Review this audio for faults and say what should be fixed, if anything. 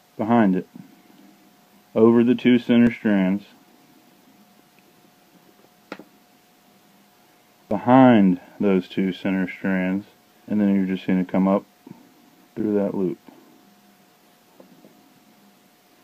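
Audio missing between chunks: the recorder likely drops a slice each time it closes one 5-second block and opens the next, so the sound skips about 20 ms at 2.87 and 7.71 s, with the edges butted together. Overlap or double-buffer the chunk handoff so no samples fall between blocks.

Damaged data in a compressed stream: corrupted frames force the decoder to lose sync and hunt for the next header, giving short blips at 7.25–7.29, 10.45–10.50 and 14.27–14.32 s. Protect the stream with checksums or error-resilient transport, and keep metadata out of the audio payload.

Underrun with held sample: the output buffer briefly ran dry and the converter froze on its last value, flattening the waveform for under a millisecond at 8.62 s and about 4 ms at 12.60 s. Playback resumes where it stopped, so there is little click. Enlarge the output buffer or raise the audio thread's priority so it is refilled in time.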